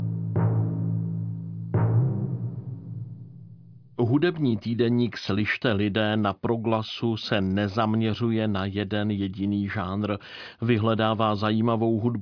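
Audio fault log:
Nothing wrong turns up anywhere in this one, so there's nothing to log.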